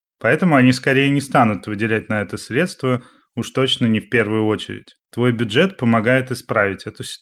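Listening to the speech recording, nothing technical stood out at any point.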